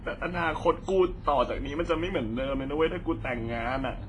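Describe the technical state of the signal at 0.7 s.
At 0.7 s the speech sounds washy and ringing, with hiss breathing along and nothing above 10.6 kHz, throughout the clip, likely heavy WMA compression at roughly 24 kbps.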